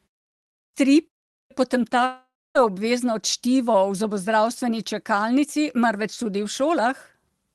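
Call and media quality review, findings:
Clipped start after a pause, 0.60 s and 1.36 s: speech resumes abruptly with its onset gone, about 140 ms and 150 ms lost, following silences of 0.6 s and 0.35 s. Output device sleeping in silence and needing time to wake or relock. Distinct from muted pauses, whose fade restores audio before the next sound, and from dropouts, because the loss sits only at onsets after silence, with no fill noise.

Long network dropout, 2.05–2.57 s: about 0.5 s of audio absent. The last sound is stretched into a fading buzz, then about 0.25 s of near-silence, and playback resumes further on with the gap's content missing. Likely a burst of lost packets concealed by the receiver. Unlike a clipped start, it strikes mid-stream rather than after a pause, and the synthetic fade-out tail gives it away.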